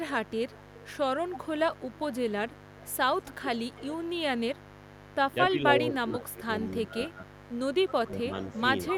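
A raspy mains buzz runs through the whole clip. It sits about 20 dB below the speech. It is built on 50 Hz, with sharp harmonics climbing into the kilohertz range. Something in the chain, such as a dimmer, a rectifier or a missing shield, lets switching spikes through twice per mains cycle. The buzz never changes. It stays under every part of the speech.

From 0.25 s to 5.33 s there is an echo leak. A faint delayed copy of the speech trails the original by 226 ms, about 25 dB down. The far end likely played the call on a loudspeaker, and its echo canceller let some of that sound back.

From 5.32 s to 7.28 s the speech is suppressed in double talk. For about a second in total, the voice dips by as much as roughly 20 dB. Both sides were likely talking at once. The echo canceller could not tell the talker from the echo, so it turned both down.

At 7.34 s the echo leak returns and lasts to the end. 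This time the delay is 258 ms and the echo is much stronger, only about 10 dB below the speech. The cause is again likely incomplete echo cancellation at the loudspeaker end.

From 7.91 s to 8.53 s, inside that echo, double talk suppression strikes again. For a little under half a second, the speech sinks by up to about 20 dB. The likely cause is the same canceller clamping down while both sides speak.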